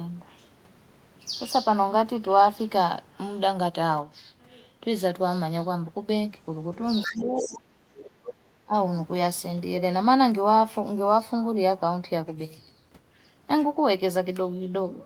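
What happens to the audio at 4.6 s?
Nothing goes wrong at 4.6 s; the speech carries on intact there, with no dropout, click or distortion at that moment.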